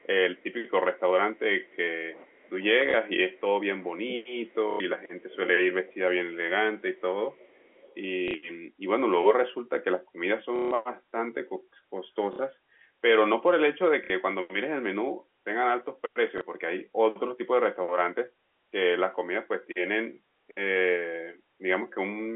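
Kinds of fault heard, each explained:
Echo leak: A faint, delayed copy of the speech trails the original by 440 ms. It sits about 35 dB below the speech in the opening 0.71 s and rises to about 30 dB below between 4.47 and 7.95 s, where it is more noticeable. The likely cause is a far end playing the call through a loudspeaker, where its echo canceller left part of the pickup in place and sent it back down the line.
Speech suppressed in double talk: The talker's level sags and thins in patches. From 0.77 to 4.3 s it dips by up to roughly 15 dB, about 3 s in all, and from 11.03 s to the end it drops by up to roughly 10 dB, around 4 s in total. This likely happens because both sides spoke at once, and the echo canceller, unable to tell this talker from its own loudspeaker echo, turned everything down.
Packet loss with last packet repeated: Short robotic stutters, or small blips where a single packet was repeated, occur at 2.91, 4.71, 8.28, 10.56, 12.33, 14.04 and 16.38 s. 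They last from 30 ms up to 150 ms, the longest at 10.56 s, which buzzes audibly. The receiver replayed the last good chunk of audio until fresh data arrived. The lengths in 30 ms steps fit 30 ms packets.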